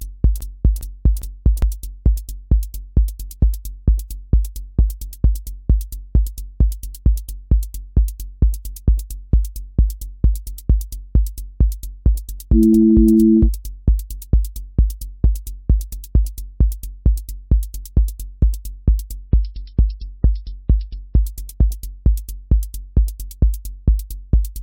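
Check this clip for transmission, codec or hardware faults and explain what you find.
Two faults stand out, one right at the top and one near the end.

From the very first instant to 1.62 s there's a broken-record loop, already running when the clip opens. A chunk of about 406 ms plays back to back, repeating three times, so whatever should have filled that stretch never arrives. The likely cause is the player or stream stalling and resending the last fragment it had buffered until fresh data came through.

Then from 19.18 s to 21.18 s the audio drops to what sounds like an adaptive stream at a lower bitrate. For those two seconds nothing sits above about 5.6 kHz, so the top end goes dull and the texture turns grainy and synthetic. It switches abruptly and without a gap, both going in and coming back out. That's the stream swapping to a cheaper rendition when the connection slowed, and the sound points to something like a 16 kbit/s MP3 fallback from a 128 kbit/s one.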